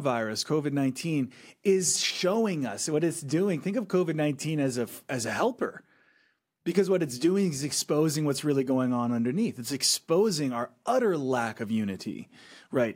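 No technical faults are audible.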